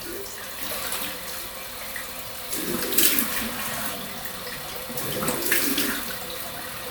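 No technical faults can be heard anywhere in this recording of sounds. Nothing breaks up, drops out or disturbs the audio at any point.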